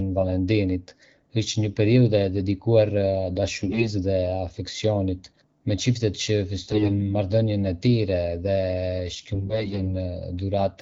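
AMR bit errors at 3.64 to 3.91 s, 6.65 to 7.15 s and 9.34 to 9.94 s corrupt the weakly protected codec bits, so pitch and level hold but the speech turns hoarse and gargly. On a spectrogram, harmonics there smear into noisy broadband texture.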